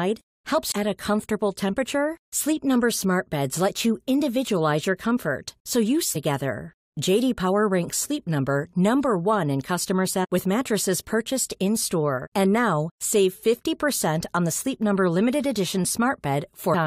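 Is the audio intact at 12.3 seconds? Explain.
No, there's damaged data in the compressed stream from 12.25 to 12.27 s, so the decoder loses sync and spits out a brief glitch.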